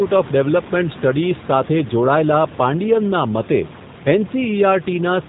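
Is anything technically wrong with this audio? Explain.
Yes. The speech passes through a G.729 codec for the whole clip. The damage is plainly audible: rough, slightly synthetic speech that fits an 8 kbit/s coder rebuilding each 10 ms frame from a filter, pitch predictor and sparse pulses. A spectrogram shows a hard ceiling at 4 kHz, and the room noise, about 17 dB below the speech, warbles.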